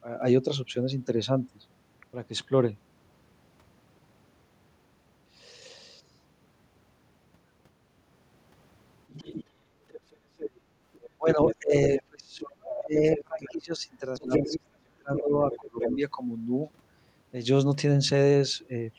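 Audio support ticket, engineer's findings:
Other side's voice leaking through: second voice at 9.09–12.02 s (about 10 dB under the talker), 13.08–13.54 s (quieter), 14.31–14.6 s (roughly level with the talker) and 15.16–15.97 s. Likely residual echo from the loudspeaker path. The spectrogram shows a separate harmonic stack overlapping the talker's.

Speech suppressed in double talk: talker's level dips and breaks up from 11.18 to 15.97 s, about three seconds affected, deepest drop around 30 dB. Likely the echo canceller attenuating both voices during overlap. The waveform shows envelope notches, and the spectrogram shows high-band gaps.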